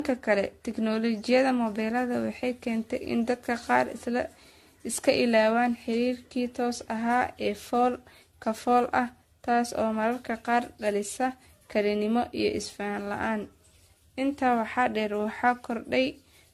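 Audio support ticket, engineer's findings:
Swirly, hollow, smeared speech throughout, consonant attacks blurred, nothing above 14 kHz. Likely generation loss: about seven AAC-style re-encodes near 64 kbit/s, artefacts stacking on shifting frame grids.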